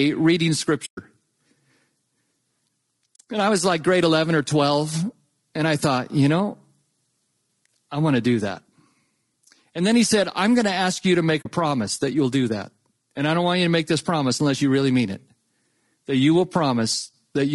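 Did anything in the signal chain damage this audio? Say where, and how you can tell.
Yes. Grainy, rough speech with noise between the harmonics runs throughout. The codec stage is the likely cause: low-delay AAC compression at a low bitrate, near 32 kbps.

AAC frame loss with muting leaves soft-edged gaps at 0.85 to 0.98 s, 3.15 to 3.20 s, and 11.41 to 11.47 s, between "ask you to make" and "promise that you'll do". AAC frames were lost, and the decoder zeroed them.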